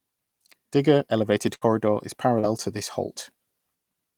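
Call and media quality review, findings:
Burst of packet loss at 1.55 to 1.63 s. The receiver's jitter buffer or decoder concealment extended the last sound for about 60 ms, fading it into a held buzz or hiss. Playback resumes later, with roughly 60 ms of audio gone.

Short concealed packet loss at 2.39 to 2.45 s. The decoder's loss concealment bridged about 37 ms by continuing the preceding sound, then cross-faded back. This is heard as a brief smear or wobble, with about 40 ms of real audio never delivered.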